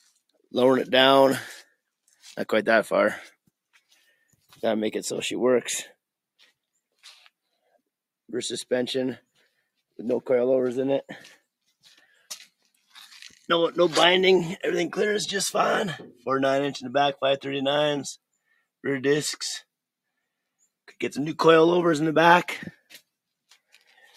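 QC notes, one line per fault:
3.74–4.1 s, sound cut by the noise suppressor: it mistook part of the sound for noise and dipped it by about 11 dB, roughly 150 ms in all.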